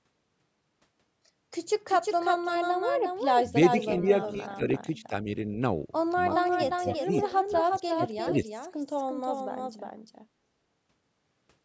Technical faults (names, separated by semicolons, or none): doubled audio track; speech suppressed in double talk; echo leak